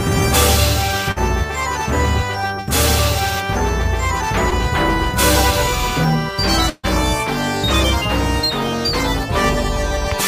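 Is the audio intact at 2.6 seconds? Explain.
Yes, at 2.6 seconds the audio plays through cleanly, with no dropout, click, distortion or other fault at that moment.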